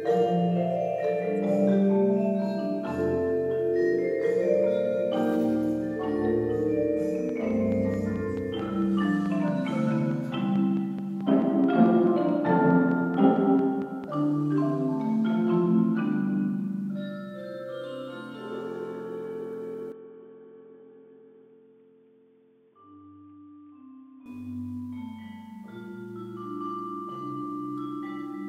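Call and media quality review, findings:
Train of clicks, 7.29 to 14.05 s: regular ticking at 4.6 per second, about thirty pulses, peaks around 5 dB above the programme, audible through pauses too. Likely interference or a struggling interface injecting identical pulses.

Input switched to a poorer device, 19.92 to 24.26 s: sudden dull, boxy tone, nothing above 3.5 kHz, level down about 10 dB, faint new noise floor, no gap at the switch. Likely a fallback to a narrowband microphone or headset call profile. Full band returns at 24.26 s.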